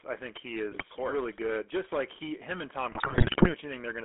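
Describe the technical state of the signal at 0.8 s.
At 0.8 s the speech sits inside a burst of GSM bit errors running from 0.72 to 0.83 s. Corrupted bits reach the decoder and distort its filter, pitch and gain values. The sound breaks into squawks and gargling, with a garbled spectrum and jumps in level.

Under this burst the whole clip carries the GSM full-rate codec. The band runs only from 250 Hz to 3.4 kHz. Pulse-driven vocal-tract modelling adds a plainly audible buzzy, gravelly roughness, which fits a 13 kbps full-rate coder.

Hard clipping is also present throughout. The signal is driven about 10 dB past what the chain can pass. Around 7 percent of samples have their peaks cut flat. That adds high harmonics, heard as a harsh fuzz on the louder parts.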